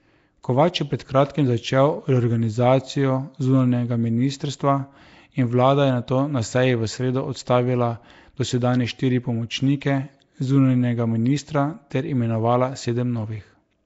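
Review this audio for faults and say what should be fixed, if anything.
Throughout the speech there is a rough, hissy halo and an underwater smear, with nothing above 7.7 kHz. The likely cause is Nellymoser compression at a rate that fits 32 kbps, where starved bands are refilled with noise. A plain low-pass would dull the sound without this hiss. Encoding with a modern codec such as Opus at a higher bitrate avoids it.

Pre-echo appears at 11.90 s as a brief hiss, about 11 ms long, just ahead of a sharp attack. The codec spread noise sized for the loud onset across its whole block, including the quiet moment before the onset. Unlike a click, it is a soft smear leading into the attack rather than a single tick. A codec that switches to short blocks on transients prevents it.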